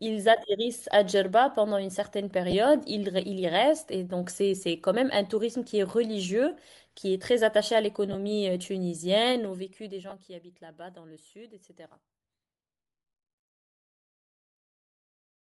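Bluetooth LC3 compression runs through the whole speech clip. The upper spectrum is thinned and filled with noise, giving the voice a plainly audible breathy, grainy edge. This fits a 10 ms frame LC3 stream at around 48 kbps, likely over a Bluetooth LE Audio link.

Lost LE Audio frames occur at 2.51–2.54 s and 8.13–8.16 s. About 20 ms goes missing each time, consistent with two frames. The decoder fills each gap by repeating the last spectrum with scrambled signs, so the sound briefly turns into a short noisy smear.

Zipper noise runs from 9.25 to 10.38 s, while the level drops by roughly 15 dB. The drop happens in 2 dB steps at about seven per second instead of a smooth glide. Each step clicks, so a ticking texture rides on the falling sound.

Within that fade, at 10.10–10.13 s, another loss of LE Audio frames puts the same brief noisy smear over roughly 20 ms.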